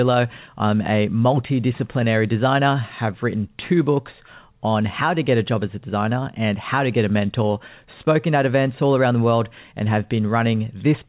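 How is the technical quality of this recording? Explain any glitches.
No glitches can be heard anywhere in the speech, which has the narrow telephone-band sound of a call path with nothing above 4 kHz, consistent with G.711 mu-law coding at 64 kbps.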